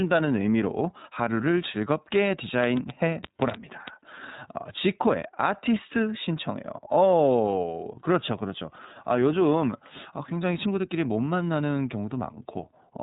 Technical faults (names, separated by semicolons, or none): iLBC codec; train of clicks